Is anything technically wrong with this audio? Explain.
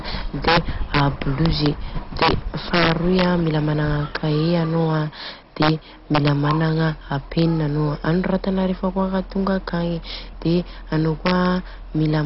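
Yes, two faults run through the whole speech clip.

Integer overflow occurs throughout on the loudest peaks, which are driven about 5 dB past full scale. Instead of being limited, those samples wrap to the opposite sign and jump across the entire range. Only a small fraction of samples, roughly half a percent, do this, but each gives a violent crack far sharper than the flattened buzz of ordinary clipping.

MP2 compression is the likely cause of the dull, gurgling, granular texture heard throughout, with nothing above 5.6 kHz. Starved sub-bands switch off and the remaining ones are coarsely quantised, which fits a heavy encode at around 32 kbps. The flickering, grainy bands set it apart from a clean low-pass filter.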